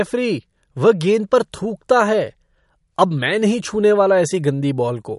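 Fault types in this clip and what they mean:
MP3 compression, throughout: treble stops sharply at about 11.2 kHz and quiet spectral detail flickers frame to frame, giving the speech a watery, swirling edge and smeared consonant onsets, likely from a bit-starved encoder, consistent with a rate near 51 kbps.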